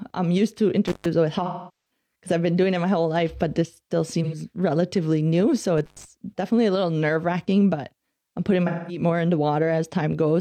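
At 0.88 s an intermittent contact opens. The speech drops out for about 0.14 s. Crackle marks each edge as a loose connection breaks and then remakes. From 1.46 to 1.91 s, just before "because I've been doing", comes AAC frame loss with concealment. About 0.43 s is gone, which fits roughly ten lost frames. The decoder rebuilds the gap from the last good spectrum, so the sound turns smeared and noisy. From 4.23 to 4.35 s, between "life but this still" and "relatively new", a shorter loss of about 85 ms leaves a brief phasey blur. At 5.78 s the contact opens again for about 0.11 s, right before "definitely a little nerve", with the same crackling edges. From 8.67 to 9.03 s a further loss of about 0.21 s smears the audio once more.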